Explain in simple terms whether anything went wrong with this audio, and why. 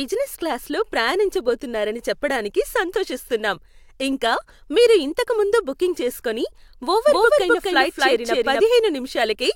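Something went wrong from 7.07 to 8.61 s. The speech plays twice there, a doubled audio track. A second, equally loud copy trails about a third of a second behind, with no echo tail. It likely comes from a slower second recording path, and starts and stops abruptly.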